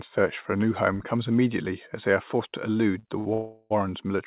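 Twice in this speech recording, which has nothing above 4 kHz as fits a narrowband G.711 call, a packet reached the receiver late, the jitter buffer ran dry, and the receiver stretched the last sound to cover the wait. These short stalls from a late packet occur at 2.99 to 3.05 s (about 36 ms held) and 3.19 to 3.27 s (about 66 ms held). Each one drags a sound out with a faint buzzy texture, then resumes at the same point with nothing lost. Soon after, the packets were likely held up for much longer in transit, emptying the buffer again and producing a call audio freeze from 3.33 to 3.72 s. For about 370 ms the receiver extends the last sound as a fading buzz that never reaches full silence. The audio then picks up exactly where it stopped, so the freeze inserts a gap without removing any content.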